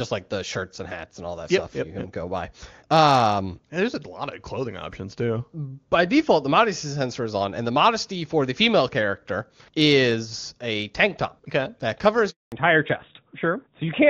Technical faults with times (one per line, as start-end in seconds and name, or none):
12.30-12.52 handover gap
12.52-14.10 fallback to narrowband